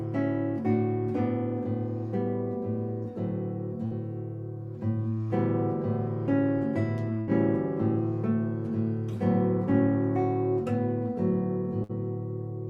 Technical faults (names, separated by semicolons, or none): burst of packet loss